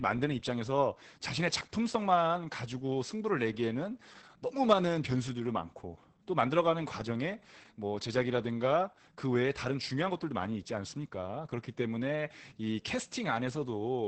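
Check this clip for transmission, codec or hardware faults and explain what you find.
One codec fault runs through the whole speech clip. Opus voice compression: SILK's coarse excitation coding makes voices hoarse and slightly robotic, and nothing sounds above 8.5 kHz, which fits roughly 10 kbps. Unlike plain low-pass filtering, it also roughens the voice's texture.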